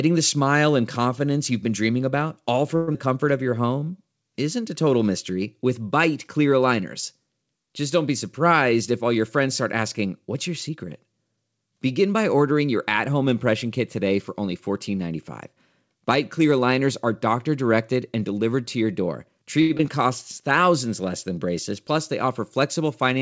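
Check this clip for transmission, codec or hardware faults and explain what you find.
Six transmission faults turn up, all from network timing and the receiver's jitter buffer, over a call path that carries nothing above 8 kHz.

Long network dropout, 2.76 to 2.96 s: audio likely stopped arriving, so the receiver extended the last sound for about 184 ms, a fading buzz or hiss, and 80 ms never plays.

Jitter buffer slow-down, 3.43 to 3.92 s: the receiver repeated pitch periods to rebuild its reserve, adding 87 ms. The sound drags at 84% speed without any pitch change.

Jitter buffer speed-up, 8.73 to 10.77 s after "don't be", and 21.72 to 23.19 s after "less than": the buffer was overfull, so short pitch-period pieces were cut, about 150 ms and 70 ms. The sound runs faster at 106% and 104%.

Short stall from a late packet, 19.61 to 19.71 s, after "delivered to your door": the buffer ran dry, so the last sound was held for 81 ms until the packet came. 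Nothing is lost, but a sound is held too long.

Short concealed packet loss, 19.77 to 19.81 s: 20 ms never reached the decoder. Brief continuation of the previous sound covers the gap, heard as a quick smear or wobble.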